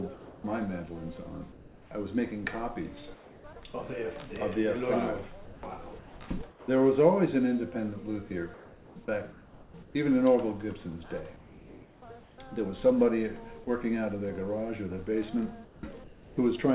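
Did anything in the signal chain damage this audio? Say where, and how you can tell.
Yes, at the call-processing stage. The pauses at 0.14–0.44, 1.52–1.91, 3.14–3.44, 5.45–5.63, 6.5–6.68, 8.54–9.95, 11.36–12.38 and 15.65–16.37 s carry comfort noise in place of the background. That is likely from discontinuous transmission: the sender stopped sending in gaps and the receiver synthesised smooth noise. The telltale sign is that texture, plus level steps where measurable: about 1, 2, 2 and 4 dB down in some gaps, about 1 dB up at 5.45 s. All of this sits inside a band that stops at 4 kHz, which fits a narrowband telephone-style codec.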